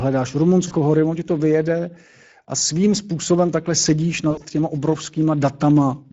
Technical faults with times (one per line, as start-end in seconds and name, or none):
0.00-6.12 Speex codec
0.67-0.74 VoIP packet loss concealed by the speech codec
2.59-2.62 VoIP packet loss concealed by the speech codec
4.31-4.46 VoIP packet loss concealed by the speech codec